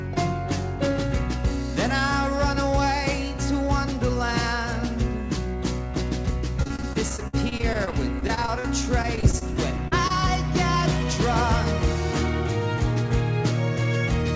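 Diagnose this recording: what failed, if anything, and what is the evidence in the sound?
The network stage failed, producing repeated packet loss (robotic sound) from 6.60 to 8.66 s and again from 9.02 to 9.43 s. The first stretch has 22 gaps up to 55 ms long and the second has 5 gaps up to 23 ms. The receiver extends the previous sound into each hole, covering about a fifth of each span and giving a choppy texture with pieces missing.

Short concealed packet loss follows at 9.88 to 9.93 s and 10.07 to 10.12 s, again on the network side. Each hole of a few tens of milliseconds is filled by continuing the last sound and then crossfading back, heard as a brief smear or wobble within the band-limited G.722 path that stops at 8 kHz.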